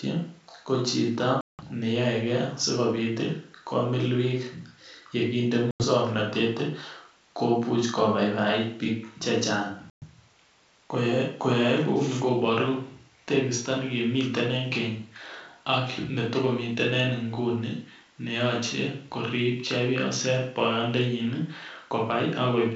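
Packet loss on an ADPCM call at 1.41 s (about 180 ms lost, just after "ko chito"), 5.71 s (90 ms) and 9.90 s (120 ms). Around ten to twenty packets vanish each time, leaving abrupt silent gaps. The decoder's predictor and step size lose track of the sender's, so the speech comes back slightly distorted before settling.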